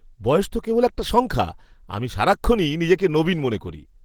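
Throughout, likely Opus compression in its hybrid speech mode, consistent with roughly 16 kbps, leaves the speech plainly hoarse and muffled, though it still reaches 20.2 kHz.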